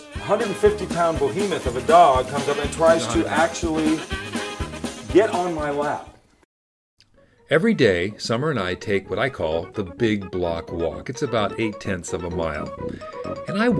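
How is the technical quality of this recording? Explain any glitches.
Nothing's wrong here: there are no glitches, dropouts or other technical hiccups to point to anywhere in the recording.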